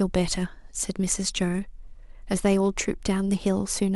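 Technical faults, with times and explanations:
0.74–3.24 s: clock slip clicks, about four faint ticks roughly 0.7 s apart, likely from unsynchronised clocks; their even spacing rules out random dropouts.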